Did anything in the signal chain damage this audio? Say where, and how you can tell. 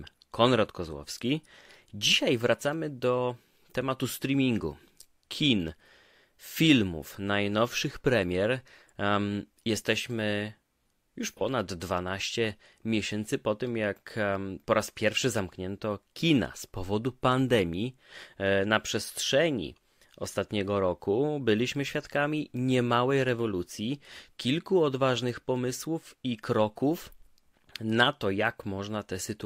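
Yes, at the codec stage. From 11.30 to 11.41 s the speech turns briefly smeared and noisy, about 43 ms of missing audio, which fits a single lost AAC frame. This is AAC frame loss with concealment: the decoder rebuilt the gap from the previous frame's spectrum.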